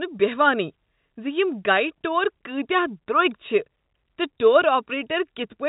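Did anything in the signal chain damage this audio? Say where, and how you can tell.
No, nothing in the chain damaged this speech: the telephone-band ceiling near 4 kHz and the faint level-tracking hiss beneath it are just what normal G.711 telephone coding, here A-law, sounds like.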